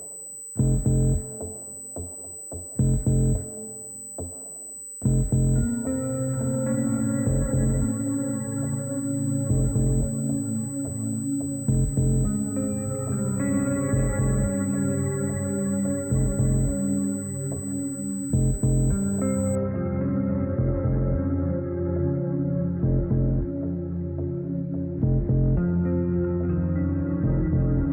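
From 0 to 19.55 s, USB whine: a fixed 8 kHz tone about 15 dB under the sound, paced by 125-microsecond microframes, not low hum.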